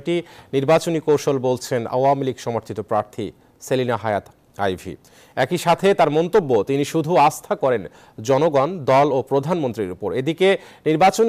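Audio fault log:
No faults detected across the clip.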